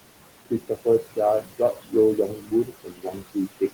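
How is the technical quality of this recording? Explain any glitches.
The recording is marred by noise suppressor artifacts throughout and by repeated speech cuts from the same processor, over room noise sitting about 15 dB below the speech.

Noise suppressor artifacts run the whole clip: the background is pushed down by about 17 dB between phrases and swells back under speech. It pumps with the speech itself, unlike steady room hiss.

Speech cut by the noise suppressor occurs at 0.5 to 0.86 s, 1.42 to 1.93 s and 2.17 to 3.73 s. The suppressor mistook quieter speech for noise and turned it down by about 13 dB in the first two stretches and about 18 dB in the last. This left roughly a tenth of a second, a fifth of a second and most of a second sounding swallowed or faint. Rather than a clean dropout, the surrounding speech carries on while only its softer parts sink.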